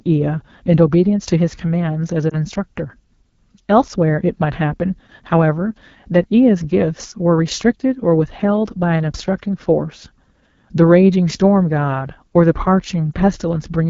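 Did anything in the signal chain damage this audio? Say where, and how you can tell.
Yes, two kinds of damage, both on the mobile side of the chain.

The whole clip runs through the AMR wideband (HD Voice) codec, and it's being pushed hard. The speech has that rough, raspy edge throughout, which points to one of the two lowest AMR-WB modes, likely 8.85 kbit/s. At that rate the pulse-driven vocal tract model can't track detail below 6.4 kHz properly, and the band above it is just shaped noise, so the grit is plainly audible.

Then there are lost AMR speech frames at the codec/network stage. There's a brief dip or warble from 2.29 to 2.33 s, and another from 13.12 to 13.14 s. Each is short enough to fit a single lost 20 ms frame. When a frame fails its checksum after radio errors, the decoder reuses the last good pitch and vocal tract settings at reduced gain, and that produces the momentary wobble you hear.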